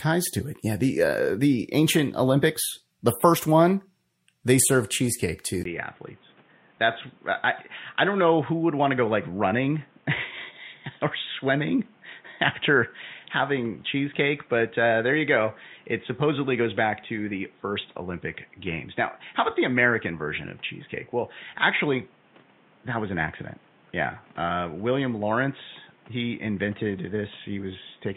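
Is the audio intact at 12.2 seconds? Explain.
No. From 5.63 s to the end, the speech is dull and boxy, with nothing above 3.8 kHz, a few decibels quieter, and carrying new background noise roughly 30 dB below the speech. The change follows a brief silence of about 20 ms. This fits an input switched to a poorer device: the recording likely changed mid-stream to another microphone or a headset's call profile, whose narrower band, lower level and own noise persist through 12.2 s.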